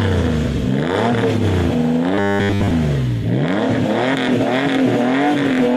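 From 2.15 to 2.71 s the sound turns into a rigid 100 Hz metallic buzz, robotic sound likely from repeating a 10 ms buffer while most incoming audio was skipped.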